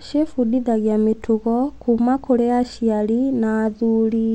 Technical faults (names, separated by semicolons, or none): none